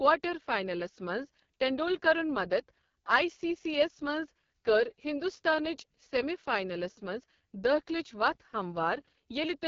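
Rough, raspy speech with nothing above 7.1 kHz throughout: AMR wideband (HD Voice) codec damage, heavy at its lowest 6.6 kbit/s rate, which models the voice crudely.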